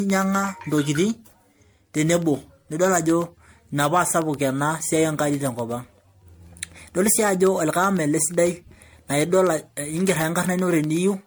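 From the start, the speech sounds swirly, smeared and hollow, with blurred consonant attacks. This is likely generation loss: repeated lossy re-encoding, each pass adding fresh quantisation noise and spectral holes on a shifted frame grid. The texture fits several passes through MP3 at around 96 kbit/s.

From 0.10 s to 11.22 s, periodic USB or driver dropouts tick every 0.125 s. A background task stalls the audio path at that fixed interval. Each time, a tiny slice of signal, well under a millisecond, is replaced with silence, leaving a regular click.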